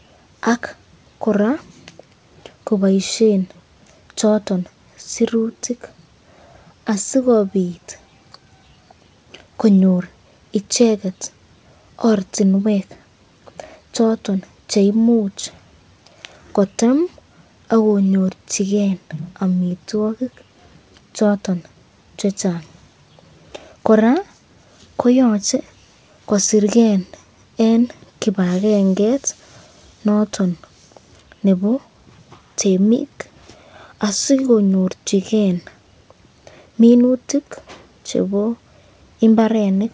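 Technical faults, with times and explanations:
The speech arrives over a working call path whose content stops at 8 kHz, which fits a wideband codec such as G.722 at 64 kbps, and no faults can be heard.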